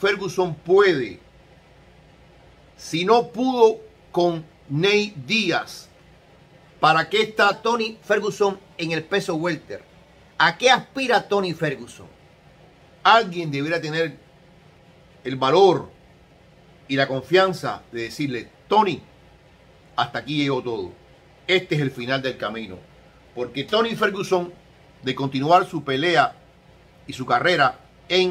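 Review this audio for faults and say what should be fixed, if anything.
From 7.53 s to 12.05 s the samples are played back faster than they were captured, with no rate conversion in between. The shift fits 44.1 kHz material running through a 48 kHz output. Because speed and pitch are tied to the same clock, the sound runs about 1.09 times fast and rises about 1.47 semitones, so that stretch comes across as hurried and slightly high before snapping back to normal. This is a wrong sample rate fault. To prevent it, resample to the device rate or set the output to match the source rate before playback.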